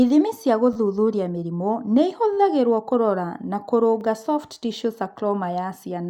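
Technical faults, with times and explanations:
0.73–0.76 s, 2.33–2.37 s and 4.01 s: repeated buffer. New audio arrived late, so the last short block played again, three, four and one extra times. The repeats at a spacing consistent with a 10 ms buffer give brief buzzy stutters with hard joins. No audio appears lost.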